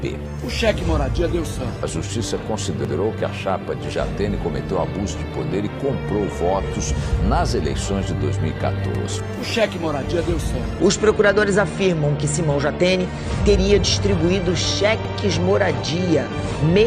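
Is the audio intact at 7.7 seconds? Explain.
Yes, the audio is intact at 7.7 seconds, with no dropout, click, distortion or other fault audible at that point.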